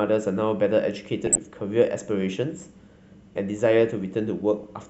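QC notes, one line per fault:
1.26–1.48 s, DAB burbling: the speech burbles with short noise blips as single frequency bands leap in level frame by frame, pointing to about ten MP2 frames corrupted by bit errors near half a percent that got past error correction.
4.61–4.69 s, DAB burbling: a shorter burst of the same burbling, a handful of frames with slightly fewer bit errors.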